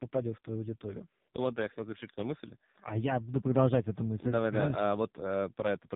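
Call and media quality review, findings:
AMR narrowband mobile codec, throughout. Speech band-limited, nothing above 3.8 kHz. Heavy buzzy, synthetic coloration on voiced sounds. The vocal-tract model is driven by too few pulses per 5 ms, which fits a low AMR-NB mode near 5.15 kbps.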